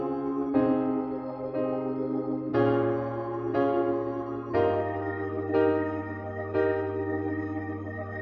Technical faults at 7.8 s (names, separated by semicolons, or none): none